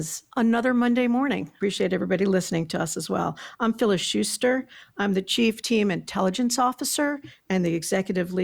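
A short bit of speech, and nothing technically wrong turns up anywhere in it.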